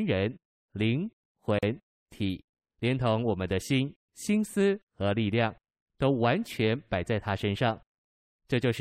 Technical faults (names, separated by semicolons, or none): gap at a join of encoded pieces